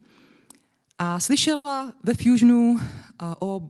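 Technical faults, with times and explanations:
1.55 to 1.67 s, short stall from a late packet: the jitter buffer ran dry, so the last sound was held 90 ms too long, then resumed with nothing lost.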